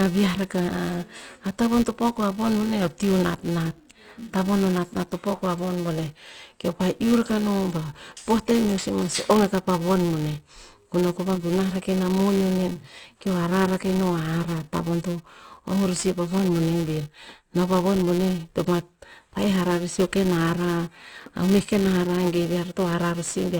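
Speech, with a filter restarted on every block throughout: each block starts from silence, leaving a level-following buzz near 345 Hz, which fits 128-sample blocks.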